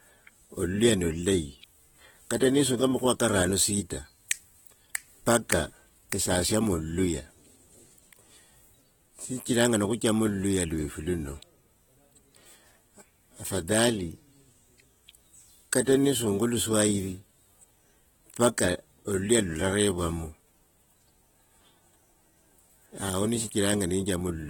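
From start to finish the speech carries plainly audible codec damage, likely from AAC compression (AAC-LC) at a low bitrate, which fits roughly 24 kbps. Nothing is present above 19.4 kHz. Sibilants turn fizzy and sustained sounds warble. What separates it from a simple low-pass filter is the smeared, unstable texture left by the coarsely quantised frequency lines and gaps in the spectrum, rather than a clean dulling alone.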